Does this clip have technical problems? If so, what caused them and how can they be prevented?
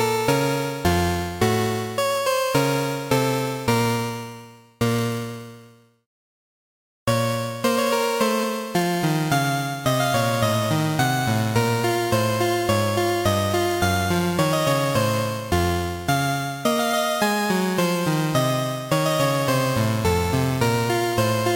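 Yes. The audio has compressed frames skipped at 8.42 s and 9.84 s. At each point roughly one frame, about 20 ms of sound, never reaches the output because it was missing from the file or the decoder rejected it as damaged. Playback jumps ahead by that amount. Checksummed storage and error-protected transmission, with retransmission of lost frames, would prevent it.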